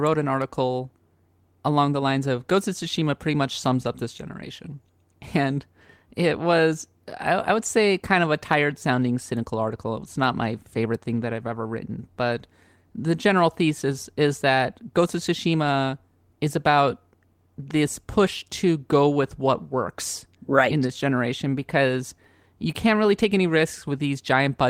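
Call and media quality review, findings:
No audible faults found in this speech recording.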